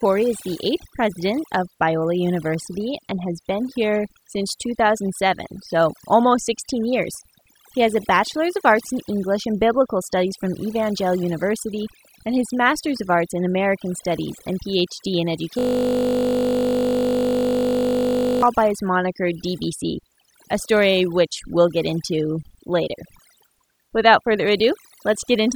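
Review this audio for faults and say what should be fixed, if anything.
The noise removal is overdone across the whole clip. The reducer was set too hard, so it's gating individual frequency bands whenever they sit near its noise estimate. That leaves a near-silent background with twinkly specks, and the quieter parts of the speech get stripped out too. Back the reduction amount off and re-process from the original noisy take.

From 15.59 to 18.42 s there's a system hang loop. The computer or driver stalled while the audio hardware kept replaying the same ring buffer, so one 20 ms slice repeats well over a hundred times. At that length it's heard as a steady 50 Hz buzz rather than a stutter. Re-record or patch that section, and keep the recording machine free of heavy background load so the driver doesn't stall mid-take.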